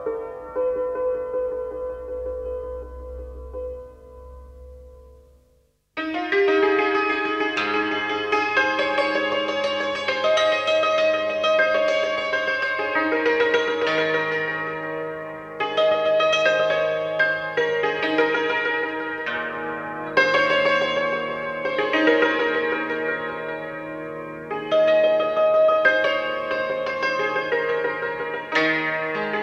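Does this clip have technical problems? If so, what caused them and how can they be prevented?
No, there are no technical problems to point to in this clip. Nothing in it needs a cause traced or a fix applied.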